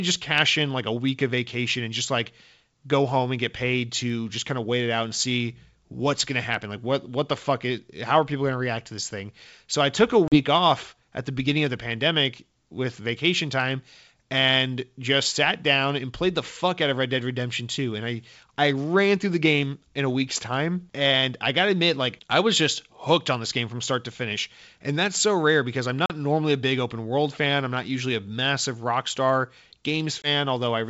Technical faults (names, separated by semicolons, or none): packet loss on an ADPCM call